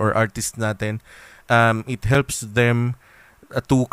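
At 2.14 s the speech drops into a block of digital silence lasting about 5.3 ms. A run of samples has been replaced by silence. The most probable reason is that the output buffer was not filled in time, and the length fits a 256-sample buffer at 48 kHz. The signal cuts off and returns with no fade. Both edges are abrupt, and the gap is so short that it is heard as a tick or dip rather than as silence.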